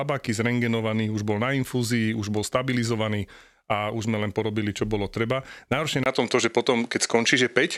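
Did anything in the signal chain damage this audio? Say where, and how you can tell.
Yes. At 6.04 s the sound abruptly loses its top end and turns duller for the rest of the clip. This is likely an input switched to a poorer device at the driver or device-selection stage. A spectrogram shows a 20 ms gap at the switch, then nothing above 11.4 kHz, a new noise floor roughly 40 dB below the signal, and a level step of around 5 dB in the waveform. The new device's narrower band, tone and noise replace the original microphone's.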